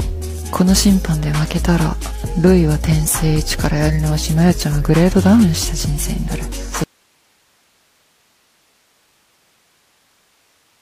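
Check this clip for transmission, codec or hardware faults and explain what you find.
One fault is present. From 6.84 s onward, the sound cuts abruptly to faint hiss about 45 dB down. This is an audio dropout to a faint residue, likely a lost source feeding a still-live path.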